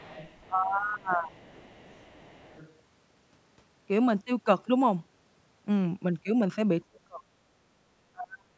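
Speech clip with two kinds of echo-canceller trouble. The other side's voice leaking through appears from 0.0 to 0.47 s, about 20 dB under the talker, and again from 1.37 to 2.74 s, fainter at about 30 dB down. This is likely loudspeaker playback reaching the microphone that the echo canceller failed to cancel fully. Unlike a level dip, it adds a second, separate voice beneath the main one rather than taking anything away. Speech suppressed in double talk shows up from 0.47 to 1.37 s, where the talker's own voice sinks by up to about 20 dB, and then more harshly at 6.87–7.22 s and 8.12–8.58 s, where the drops reach about 40 dB and the voice nearly cuts out. The likely cause is the canceller mistaking overlapping talk for echo and turning everything down. What sets it apart from leakage is that the main voice itself thins and vanishes. The call's microphone processing passes audio up to 8 kHz, with the lowest bass trimmed away.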